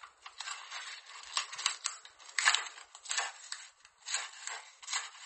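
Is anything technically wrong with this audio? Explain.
Yes, the whole clip sounds strained: nothing comes through above about 8.4 kHz, and the top end has a watery, swirly shimmer with smeared attacks. That's likely MP3 compression, and the low cutoff fits a starved bitrate of around 32 kbps, where the encoder drops the treble and lets weak frequency lines flicker on and off.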